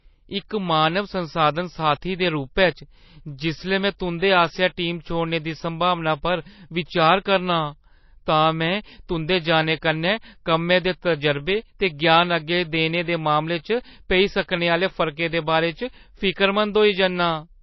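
Throughout, the speech has plainly audible watery, swirling artefacts and nothing above 5.8 kHz, likely MP3 compression at a low bitrate near 24 kbps. The fluttering dropouts set it apart from a plain low-pass filter. Pre-echo at 0.49 to 0.51 s and 14.43 to 14.48 s puts a brief hiss of 20 ms and 56 ms before sharp attacks, blurring their onsets. It differs from ringing because the noise comes ahead of the attack, not after it.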